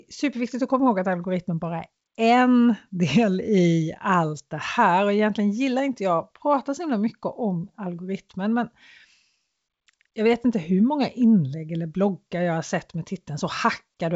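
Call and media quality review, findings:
Nothing stood out on listening to this speech clip, which carries the wideband G.722 telephone path with content extending to about 7.7 kHz.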